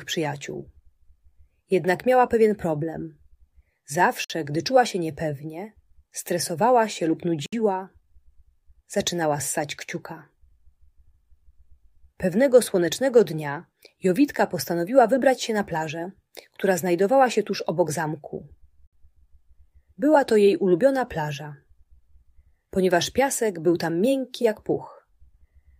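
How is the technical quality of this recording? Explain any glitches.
Three brief dropouts break the continuous sound: at 4.24 to 4.30 s (55 ms), 7.46 to 7.53 s (65 ms) and 18.87 to 18.93 s (61 ms). Each is a sudden, slightly softened silence before the sound resumes where it left off. These are gaps at joins of encoded pieces, where separately encoded segments were spliced without trimming each encoder's leading delay and final-frame padding.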